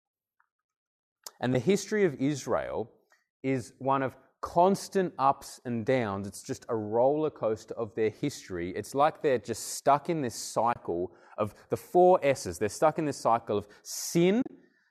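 AAC frame loss with muting hits at 1.54 s, 10.73 to 10.76 s, and 14.42 to 14.50 s. The decoder zeroed the missing frames. Overlapping windows fade the sound out and in. The first gap is a brief dip; the later ones are soft-edged holes. The last gap is broken up. Its longest run is about 40 ms.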